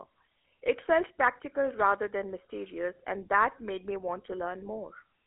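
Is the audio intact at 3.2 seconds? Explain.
No. At 3.2 s, as across the whole clip, the speech carries GSM full-rate codec damage: it fits a 13 kbps GSM full-rate coder. This coder models the vocal tract and drives it with a sparse, evenly spaced pulse excitation. That leaves a plainly audible buzzy, gravelly roughness and a telephone band with nothing above about 3.8 kHz.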